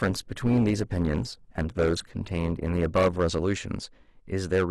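Speech, with hard clipping running through the whole clip. The peaks are driven roughly 11 dB past what the stage can pass, so they are sliced flat. That affects only a small share of the signal, around three percent of samples, but it puts a gritty crackle on every loud syllable. On a waveform the tops and bottoms sit pressed against a straight ceiling. On a spectrogram each peak throws a vertical smear of harmonics high up the spectrum.

The opening also shows an adaptive stream starting at a low bitrate. From 0 to about 3.2 s the treble is thin and partly synthetic, with stronger codec artefacts, which fits a low Opus rate of roughly 16 kbit/s. At 3.2 s the quality jumps up without any gap, consistent with a step to about 64 kbit/s once the connection was measured. On a spectrogram the upper band is empty or patchy before 3.2 s and fills in abruptly at that point.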